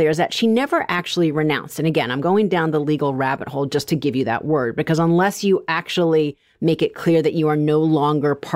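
Nothing here calls for a timestamp: the speech runs along without a single technical fault turning up anywhere.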